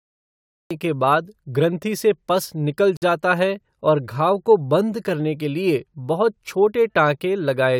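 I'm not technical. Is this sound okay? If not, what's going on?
No. There is a cut-off start: silence until 0.71 s, then the speech jumps in mid-sound. The recording began late, so nothing fades in.

At 2.97 s there is a gap at a join of encoded pieces. A silence of about 53 milliseconds breaks the speech. The audio was saved in separate chunks and joined without trimming the empty padding. The speech then continues where it stopped.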